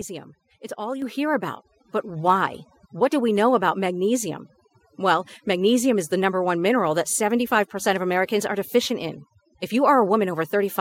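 Throughout the speech, the background drops and breaks up into twinkling specks. That is overdone noise removal: a noise reducer set too strong pulls individual frequency bands down whenever they approach its noise estimate, taking quieter parts of the voice with them.

At 1.02 s the voice and background jump up together by about 6 dB, and at 2.16 s they rise again by about 3 dB. Each is the microphone volume stepped up: the call software judged the input too quiet and raised the device gain in a single step.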